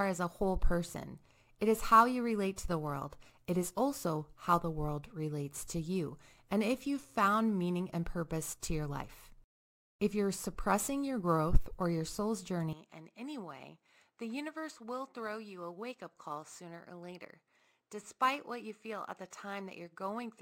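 Throughout the speech, sample clock jitter of around 5 µs adds a roughness roughly 30 dB down that swells on loud, bright syllables and vanishes in pauses, unlike steady broadband hiss. At 12.73 s, right after "growth or your soul's", the sound abruptly turns duller, nothing above 8.8 kHz, about 10 dB quieter, with a faint new noise floor and no gap, likely an input switched to a poorer device rather than gradual filtering.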